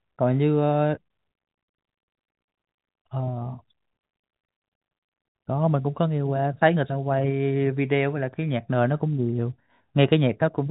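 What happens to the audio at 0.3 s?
Nothing goes wrong at 0.3 s: the speech there is intact, carried through G.711 telephone coding with its band-limited sound that stops a little below 4 kHz.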